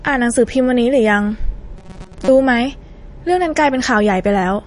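Right from the start the speech carries clear MP3 compression damage, likely from a low-bitrate encode around 40 kbps. Nothing comes through above about 10.6 kHz, so the top end sounds dull, and the sparse frequency content gives a watery, swirling edge to the sound.

From 1.77 to 2.29 s the speech turns into a rigid metallic buzz pitched at 188 Hz, a robotic sound from repeated short buffers. Likely cause: audio arrived too late, so roughly half of that stretch is a repeated chunk of about 5.3 ms instead of new material.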